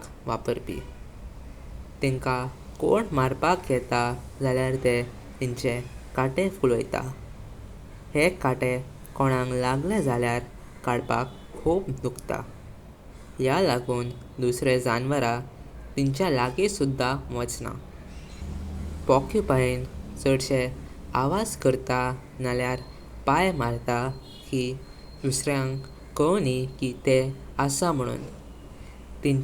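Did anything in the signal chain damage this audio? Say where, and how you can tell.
No, no damage is audible.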